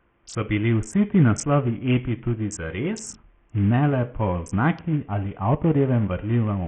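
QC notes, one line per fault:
Throughout, Bluetooth SBC compression: the link likely ran SBC with a tiny bit pool, fitting a 48 kbps stream. The top sub-bands starve of bits and the rest are coarsely quantised, so the speech's treble flickers and drops under gritty, aliased noise.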